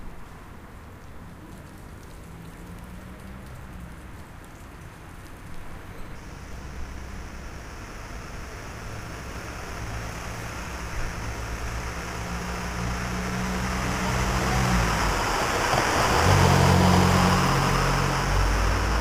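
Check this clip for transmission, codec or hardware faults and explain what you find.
One hardware fault is present. Periodic clock jitter runs from 6.15 s to the end. Interference near 4 kHz wobbles the converter clock, adding sidebands. The result is a rough, metallic edge.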